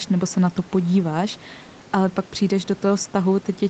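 Nothing in the speech stood out as a problem on listening.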